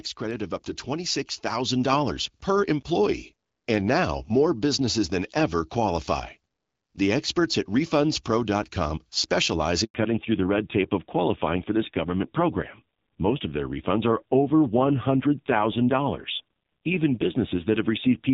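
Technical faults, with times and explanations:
0.2 to 2.95 s, automatic gain rising: the level climbs steadily by about 7 dB over nearly three seconds, and the background lifts right along with the speech. That joint swell is the sign of an automatic gain control that judged the incoming signal too quiet and raised its gain step by step, rather than the talker getting louder. The slow ramp reflects the control's deliberate time constant.
9.84 s, handover gap: the speech cuts out for about 100 ms, fading within a few tens of milliseconds and then going fully silent before sound resumes. This happens when the call is moved between networks and no speech frames arrive during the switch. The receiving end has nothing to play, so whatever was said in that tenth of a second is simply gone.
9.94 to 18.34 s, fallback to narrowband: immediately after the gap, everything above 4 kHz disappears and the speech turns duller, thinner and rougher. 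Before this point the HD Voice link carries content up to about 7 kHz with only light coding damage. The call has likely dropped from AMR wideband to an older narrowband codec. The added roughness fits a low rate of around 5.9 kbit/s, and the band limit persists to the end.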